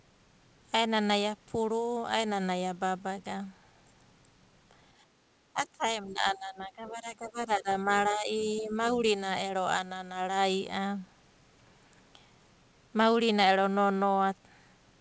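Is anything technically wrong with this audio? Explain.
Yes, there are two kinds of fault.

From 5.06 to 5.25 s, the background is gated by the echo canceller. The room sound drops by about 8 dB while the loudspeaker plays, but the speech itself stays intact, which sets it apart from double-talk suppression.

Between 5.53 and 8.71 s, the speech sinks by about 10 dB for roughly two seconds in total. At 8.94 to 9.03 s it dips again, by about 5 dB. The likely cause is speech suppressed in double talk: the canceller mistakes the talker for echo and pulls the voice itself down, not just the background.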